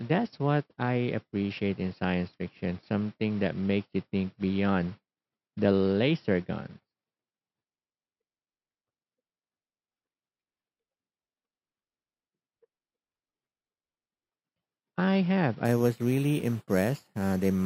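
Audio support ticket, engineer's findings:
Imaging from sample-and-hold upsampling, 15.65–17.66 s, after "I have". 12 kHz to 48 kHz by sample repetition, unfiltered. Mirrored speech images 6–12 kHz, about -24 dB: metallic fizz.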